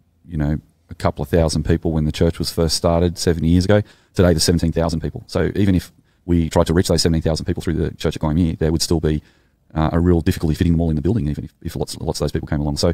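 At 3.6 s, just after "was first started seventy", the speech abruptly runs 1.54 times faster until the end. The pitch stays put. It sounds rushed. This is likely a time-stretched section, squeezed shorter by dropping brief slices of audio.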